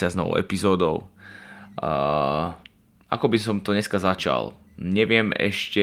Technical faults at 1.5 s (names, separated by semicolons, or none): none